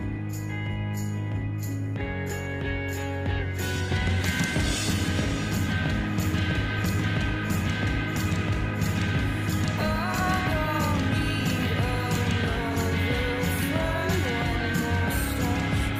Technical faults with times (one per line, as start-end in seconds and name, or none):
none